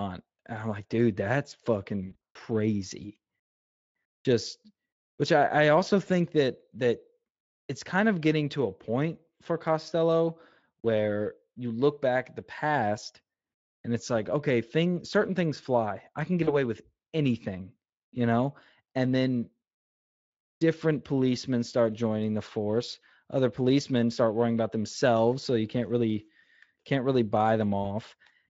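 Speech over a Speex link with VoIP packet loss concealed by the speech codec. Right after "I'm like dude that's," from 2.07 to 2.37 s, the decoder stretches and fades the sound. There's a shorter smear between "things fly I can" and "with anything you know" at 16.43 to 16.56 s, and a brief one at 27.83 s.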